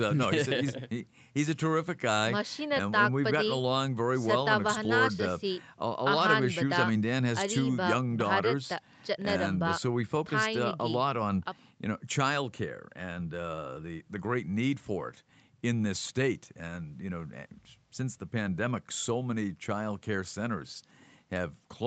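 Nothing in this speech recording stood out as a technical problem on listening.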